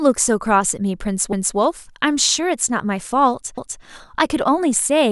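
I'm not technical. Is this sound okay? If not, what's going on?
No, there's a glitch. At about 1.33 to 1.58 seconds, and again at 3.58 to 3.83 seconds, a quarter-second piece of the speech plays twice, like a brief stutter. This is called overlapping chunks. The audio was handled in two-second pieces, and each new piece started a quarter second before the previous one had finished, so that overlap gets heard a second time at each join.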